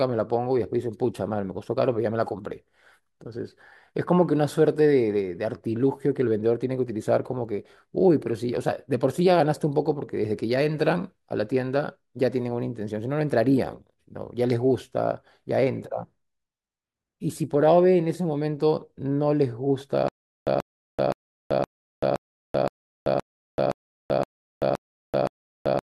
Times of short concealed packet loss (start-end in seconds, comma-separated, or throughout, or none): none